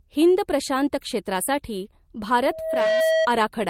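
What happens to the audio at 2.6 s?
Loudspeaker feedback squeal runs from 2.43 to 3.28 s. The microphone picks up its own loudspeaker, and at 643 Hz the loop gain passes one, so a pure tone swells over roughly half a second until it sits about 5 dB above the speech.

Just before 2.6 s, from 2.53 to 2.57 s, there is a short concealed packet loss. The missing audio is covered by extending the preceding sound and then blending back into the real signal, which leaves a brief smear or wobble under the rising squeal.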